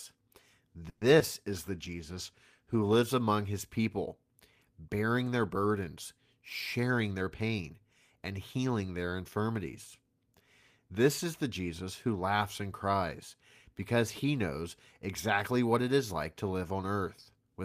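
At 0.89 to 1.03 s there's a call audio freeze: about 120 ms of fading, buzzy continuation of the last sound, likely from late packets draining the jitter buffer, with nothing lost afterwards.

Right after, at 1.19 to 1.22 s, still before "is the", comes short concealed packet loss. About 20 ms never arrived, and the patch-up leaves a quick smear or wobble.

From 1.76 to 3.10 s, between "is the" and "among his people", a call bitrate drop takes it from 32 to 18 kbps for about 1.3 s, so the sound goes rough.

Then from 6.78 to 7.74 s a jitter buffer speed-up trims around a tenth of a second in small chunks, so the audio runs about 10% fast at unchanged pitch and feels hurried.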